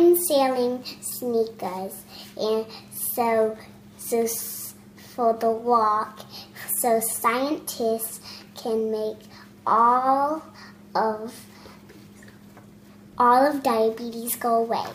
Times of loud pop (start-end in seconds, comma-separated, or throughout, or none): none